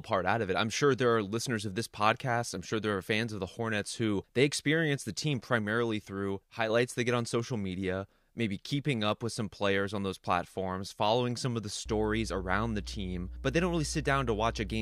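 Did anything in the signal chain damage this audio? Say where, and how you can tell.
Yes. A ground loop or an unshielded run near a transformer in the analogue wiring let the power line couple into the signal. From 11.86 s, right after "following some of the", a steady low mains hum at 60 Hz with some low harmonics sits under the speech until the clip ends. It is strong, only roughly 10 dB below the speech, and its fixed pitch and constant level mark it as electrical pickup rather than acoustic noise.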